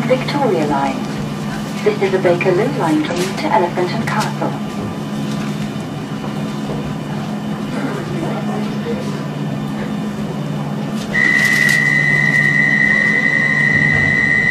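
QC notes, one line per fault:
3.07–3.13 s and 10.92–10.96 s, damaged data in a compressed stream: two short bursts, about 60 ms and 40 ms long, where corrupted bytes in the encoded stream make the decoder misread frames and lose sync while it hunts for the next valid frame header. The result is a brief chirp, squawk, click or short hole. On a spectrogram each shows as a sharp-edged disruption. The waveform has an abrupt discontinuity at each boundary.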